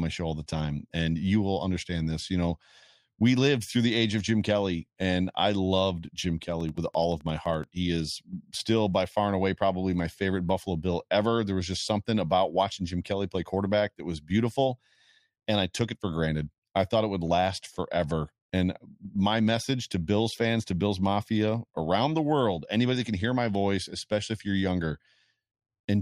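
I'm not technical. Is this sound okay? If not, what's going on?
No. For just over a second, from 6.43 to 7.65 seconds, something in the recording chain was likely injecting a short electrical pulse over and over, perhaps interference from nearby equipment or a faulty connection or power supply. The result is a train of clicks: about fifteen near-identical ticks at a steady pace of 11.6 per second, roughly as loud as the speech itself.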